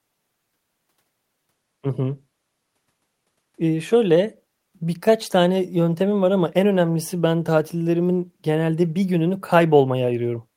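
No audible technical faults here.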